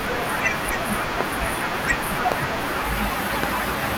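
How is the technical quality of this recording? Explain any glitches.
Three loud pops interrupt the speech. A single pop at 1.21 to 1.23 s peaks about 20 dB above the speech, a double pop spans 2.32 to 2.44 s, and another single pop at 3.43 to 3.46 s reaches about 15 dB, as does the double. Each is likely a brief voltage spike from a plug, switch, static or driver glitch, shaped by the following circuitry into a sharp thump while the speech continues underneath. On a waveform they stand out as tall, narrow spikes. On a spectrogram they appear as thin vertical stripes spanning all frequencies.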